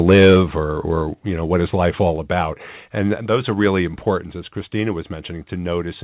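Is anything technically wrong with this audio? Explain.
Yes, there are two faults in this speech.

From 0.08 to 0.41 s the loudest syllables carry a harsh, crackling edge with flattened peaks, driven roughly 6 dB past full scale, with around a tenth of samples clipped. This is microphone overload, likely from input gain set too high for the converter.

At 0.14, 1.14, 2.16, 3.18 and 4.2 s the voice and background drop abruptly by about 2, 4, 3, 2 and 3 dB. This pattern of microphone volume stepped down likely comes from the call software cutting input gain in steps. The call path itself has nothing above 4 kHz, as expected from G.711 mu-law at 64 kbps.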